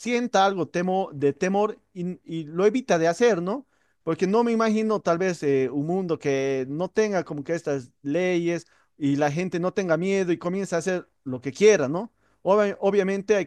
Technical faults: none

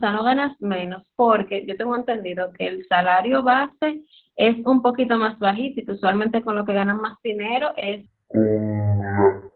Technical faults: Opus voice compression; section at the wrong speed

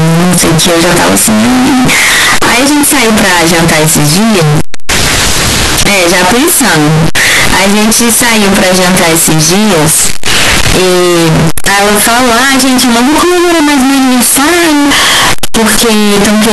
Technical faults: float read as integer

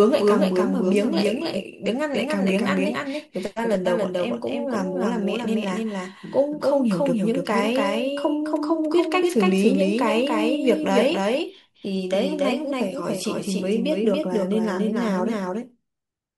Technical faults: doubled audio track

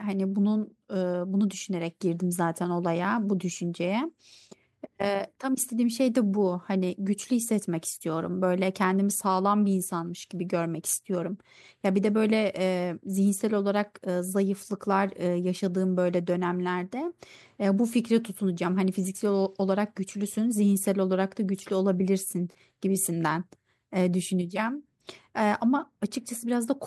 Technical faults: none

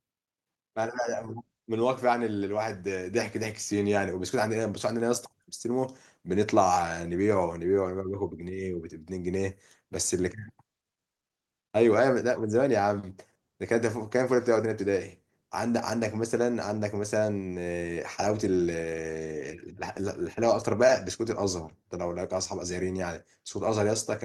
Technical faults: none

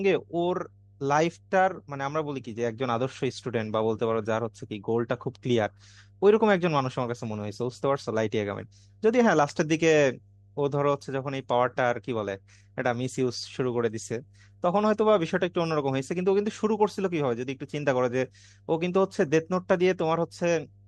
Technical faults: mains hum

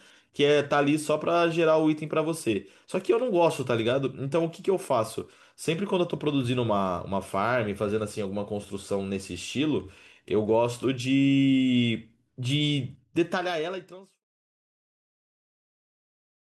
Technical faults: none

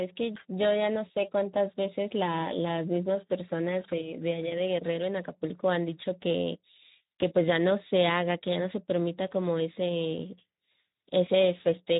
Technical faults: Speex codec

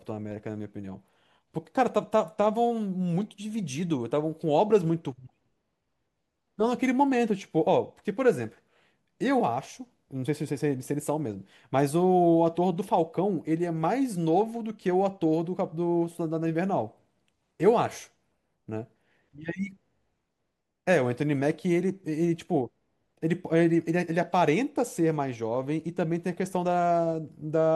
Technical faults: none

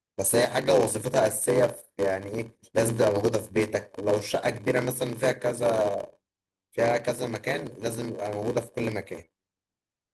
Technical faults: block size mismatch (padded); lost packet rebuilt from error correction; short concealed packet loss

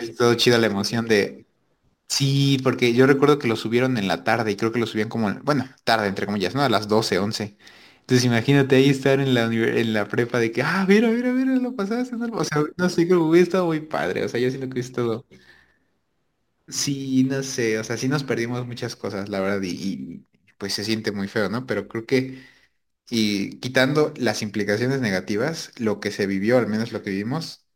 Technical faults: crude rate conversion

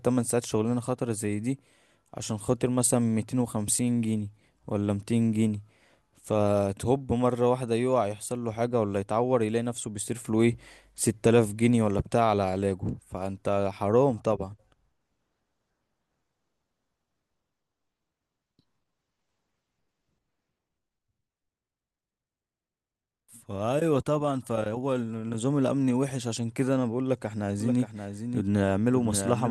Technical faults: doubled audio track

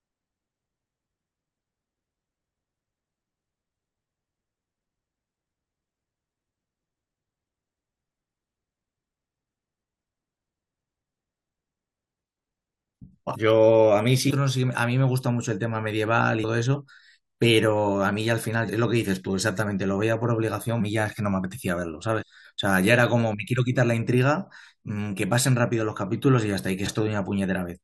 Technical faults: compressed frames skipped

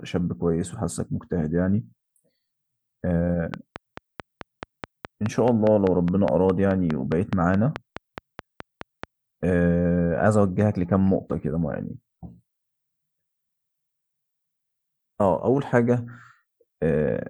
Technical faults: train of clicks

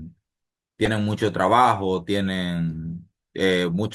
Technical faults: corrupt frame decoded

